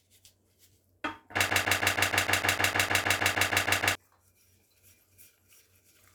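From 1.50 to 3.95 s, a broken-record loop repeats one 0.15 s fragment identically 16 times, likely a stalled stream; unlike echo, repeats never decay and the intervening audio vanishes.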